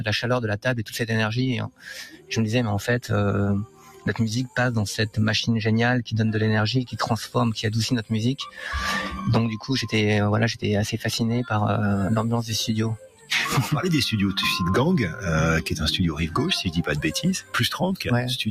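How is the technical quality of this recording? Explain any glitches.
The technical quality is compromised by a speech noise suppressor left running on non-speech material. Throughout the clip, this noise suppressor applied to music or sounds swings the level by around 10 dB. It treats sustained content as noise, so the sound pumps. On a waveform, the envelope breathes irregularly.

Sound cut by the noise suppressor occurs at 0.58–0.94 s, 1.62–2.33 s, 3.65–4.13 s and 12.96–13.31 s. The drops are about 15, 17, 15 and 15 dB, and they sink sustained parts and truncate decays. These appear as darkened spectrogram patches and hollowed waveform sections.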